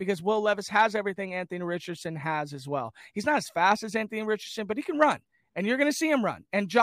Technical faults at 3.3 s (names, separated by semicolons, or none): none